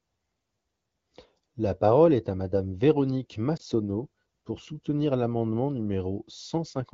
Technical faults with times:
3.57-3.61 lost AMR speech frames

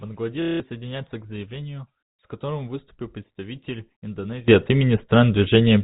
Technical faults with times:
0.42-0.60 packet loss with last packet repeated
4.48-5.84 sudden gain jump

